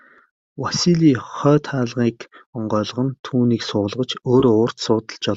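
AAC frame loss with concealment hits this speech clip at 4.40 to 4.43 s. About 20 ms of coded audio goes missing, which fits two lost low-delay frames. The decoder patches the gap from the last good spectrum, leaving a brief smeared, noisy blip rather than a dropout. The stream itself likely comes through low-delay AAC, with only light coding roughness audible.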